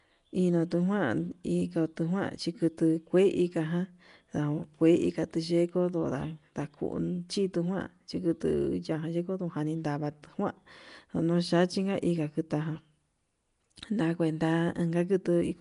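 Throughout this speech clip the sound carries a rough, hissy halo and a smeared, underwater quality, with nothing above 10.6 kHz. Likely cause: Nellymoser compression, the old Flash codec, filling starved bands with noise, at a rate that fits about 44 kbps.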